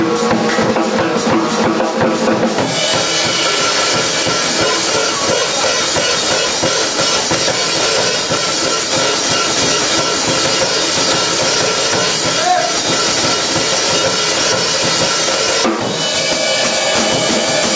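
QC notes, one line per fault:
throughout: gain pumping. The level drops by around 10 dB under every loud sound, squashing the dynamics, likely from a fast limiter fighting gain set far too high. Unlike a noise gate, the floor never falls to silence.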